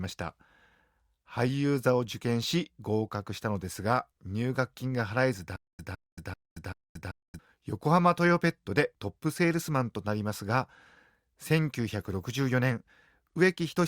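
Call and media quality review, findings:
Stutter with silent gaps, 5.56 to 7.39 s. Same 160 ms fragment replays four times, 228 ms digital silence between, 388 ms cycle. Likely playback or stream stall. Each retry replays last buffer, then runs dry. Intervening audio lost.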